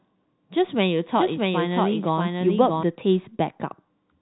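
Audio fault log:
1.15–2.83 s, doubled audio track: a second, likely slower capture path mixes the same speech back in roughly 0.7 s late and at about equal level, so each sound repeats as a dry, full-band copy that starts and stops abruptly.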